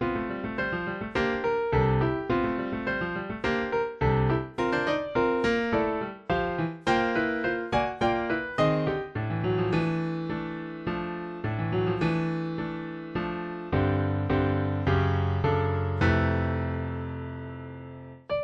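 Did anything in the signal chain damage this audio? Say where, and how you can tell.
No, nothing in the signal chain audibly damaged this audio. No stage, from the wiring through to playback, leaves a mark that can be heard anywhere in the clip.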